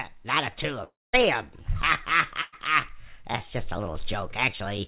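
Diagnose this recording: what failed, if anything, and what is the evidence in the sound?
Network stage, most likely a long network dropout. From 0.84 to 1.15 s the last sound is stretched into a fading buzz or hiss, and about 220 ms of that stretch is plain silence. When the audio resumes, roughly 300 ms is missing because that audio never arrived and was never played.

Network stage again, a burst of packet loss at 2.41 to 2.54 s. About 120 ms of audio was lost or came too late to be played. The jitter buffer filled the gap with a decaying continuation of the preceding sound and then jumped ahead, so the span in between is missing. The band stops at 4 kHz throughout, consistent with a G.711 narrowband call codec.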